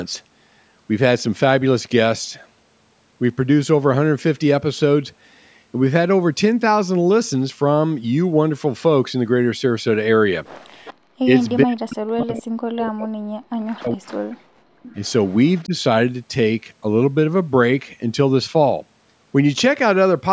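A speech recording in which the far end's echo canceller likely let loudspeaker pickup through, producing echo leak: faint delayed copies of the talker return at 10.85–10.94 s, 11.42–11.53 s and 12.35–12.43 s, each trailing the original by about 413 ms, then a longer stretch from 14.83 to 15.65 s at about 461 ms. These scraps sit well under the direct speech, roughly 15 to 35 dB down, the 12.35 s one most audible and the 11.42 s one barely there. The same canceller likely could not tell the talker from the returning echo during overlapping speech, so speech was suppressed in double talk. From 11.65 to 14.41 s, about three seconds, the voice dips and breaks up, falling by as much as about 40 dB at its deepest. A shorter dip of about 10 dB follows at 15.65–15.74 s, right as the long echo ends. The normal call-style microphone processing limits the band, with nothing above 8 kHz.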